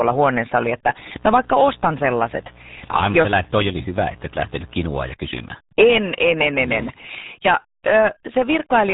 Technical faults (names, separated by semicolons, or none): RealAudio 14.4 codec; mains buzz